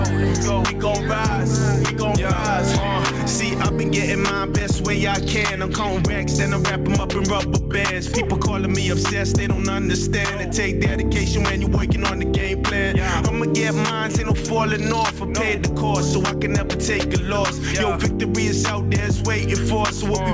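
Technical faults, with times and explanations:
Throughout, gain pumping: the level swings by around 10 dB, so loud and quiet passages sit unnaturally close together and the whole clip sounds squashed and breathing. This is likely from the input gain being set far too high for the microphone, with a fast limiter or compressor repeatedly clamping it down. The band-limited top, with nothing above 8 kHz, fits a G.722 call codec.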